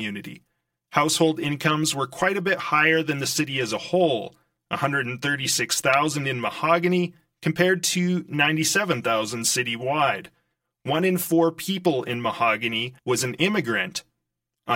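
Throughout the speech, one channel lags the other by around 5 ms, causing channel delay comb filtering: notches from near 100 Hz sound hollow, appearing as evenly spaced dark spectrogram bands.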